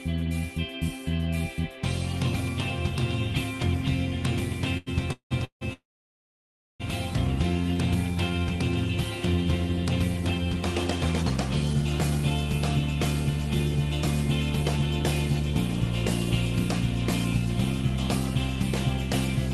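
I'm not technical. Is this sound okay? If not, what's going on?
No. A short stall from a late packet happens at 4.77 s. For about a tenth of a second the sound is held in place, stretched out, because one piece of the call arrived late and the receiving end kept repeating the last bit while it waited. When the piece arrived, the audio picked up exactly where it stopped, so nothing is lost. It just drags for a moment.

A call audio freeze follows in three bursts: 5.12 to 5.33 s, 5.45 to 5.63 s, and the longest from 5.73 to 6.82 s. Each one starts as a brief buzz that fades into silence. The last is about a second long and almost entirely quiet. The likely cause is that pieces of the call were held up in transit, and the receiver had nothing to play until they arrived. Playback then resumes where it left off, adding gaps rather than cutting anything out.

A jitter buffer slow-down runs from 8.15 to 8.46 s. 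The audio plays at about 88% of normal speed but keeps the same pitch, because the receiver repeated tiny slivers of sound to rebuild its reserve. It adds roughly 46 ms, so that stretch sounds slightly drawn out.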